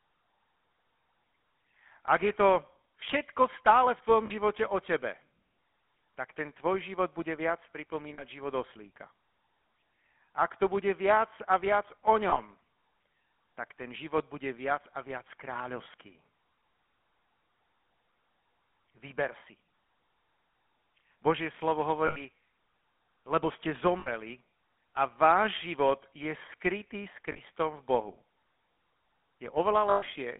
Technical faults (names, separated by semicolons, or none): GSM full-rate codec; lost GSM frames